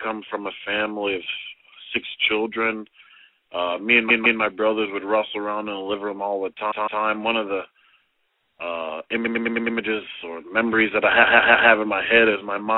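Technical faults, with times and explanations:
4.09–4.40 s, 6.70–7.02 s, 9.24–9.76 s, 11.22–11.69 s: repeated frames. A 157 ms block of compressed audio (105 ms at 9.24 s) replays two, two, five and three extra times. The result is a stutter, adding 0.31–0.52 s each time.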